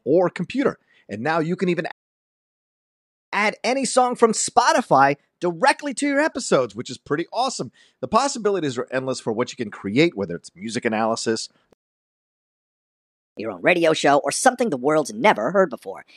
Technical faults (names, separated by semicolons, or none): playback stall; catch-up at higher speed